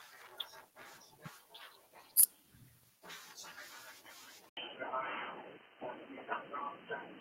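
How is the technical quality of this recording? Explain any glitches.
Two problems stand out in the speech, one brief and one lasting to the end.

From 2.19 to 2.24 s there's a burst of microphone overload: a harsh, crackly edge on the peaks, likely from input gain set about 16 dB too hot, so a small share of samples get flattened at the converter's ceiling.

At 4.49 s, after an 80 ms gap, the sound goes dull and boxy with a narrower band, plus faint new background noise well below the speech. Loudness barely changes. That's likely the input switched to a poorer device, such as a headset's call profile.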